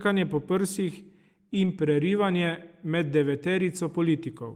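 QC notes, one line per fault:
1.53–1.67 s, lost packet rebuilt from error correction: the speech keeps going with no gap, but for a short stretch it turns rougher and noisier before clean audio returns. The packets carrying this span were lost, and the packets that followed each held a reduced-bitrate copy of the one before. The decoder played those low-quality copies, about 80 ms in all, which fits four 20 ms packets.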